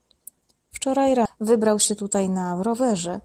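The clip is speech with two timing faults. At 1.25 to 1.27 s there is a skip ahead: roughly 0.7 s of audio was discarded while later audio was already queued, and playback jumps straight to it with no gap or fill. On a waveform the envelope splices abruptly from one shape to an unrelated one. A spectrogram shows harmonics and formants breaking off and restarting at different positions in a single column, with nothing between. Just after that, from 1.37 to 2.74 s, a jitter buffer speed-up follows. The receiver, now holding more audio than its target, repeatedly cut out short pitch-period-sized pieces, around 0.15 s in total, so this stretch plays at 110% speed at unchanged pitch and sounds hurried. On a spectrogram the harmonic spacing stays the same while syllables and formant transitions are compressed in time. The waveform shows shortened segments where many pieces were removed.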